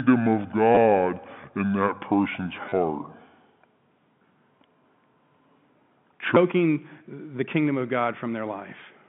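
A section at the wrong speed runs from 0.0 to 6.36 s, playing at 0.668 times its proper rate. Speed and pitch fall together, so the speech sounds slow and deep, roughly seven semitones low, likely from being replayed against the wrong clock.

Packet loss with the last packet repeated occurs twice inside that slowed stretch, at 0.75 to 0.77 s (20 ms) and at 2.69 to 2.72 s (30 ms). The receiver fills each gap by replaying the last received chunk of audio, so the sound briefly stutters with a robotic edge. The repeat timing fits packets of about 10 ms.

Throughout, the G.711 telephone coding limits the band to roughly 150 Hz to 3.5 kHz.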